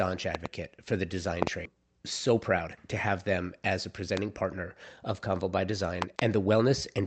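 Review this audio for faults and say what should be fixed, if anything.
Loud pops at 0.35–0.48 s (a pair, about 15 dB above the speech), 1.43–1.49 s (a pair, about 20 dB), 4.17–4.19 s (a single pop, about 20 dB) and 6.02–6.21 s (a pair, about 20 dB) sit on top of the speech, which carries on beneath them. Each is a sharp voltage step or pulse shaped by the downstream circuitry, and it is likely caused by static discharge, a loose connector or a driver glitch. Secure cabling, ground the setup and update the audio driver to stop these.

Skip ahead at 1.65–1.76 s: playback lurches forward with no gap fill, and roughly a second of speech is simply gone, the two sides of the cut joined almost directly. This happens when audio is dropped on the way, or when the jitter buffer overflows and discards a long run of queued audio, shedding about a second of accumulated delay in one step. Size the jitter buffer adequately and let it drain gradually rather than dumping audio wholesale.

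Jitter buffer speed-up across 2.30–3.20 s: the speech runs at about 106% of normal rate with unchanged pitch, sounding slightly rushed. The receiver was holding more audio than its target, so it trimmed short pitch-period slices many times in a row, removing around 70 ms in total to pull latency back down. The narrow, Opus-like coding sound with nothing above 8 kHz fits a 32 kbps call path. Smoother network delivery or a gentler buffer target would avoid this catch-up.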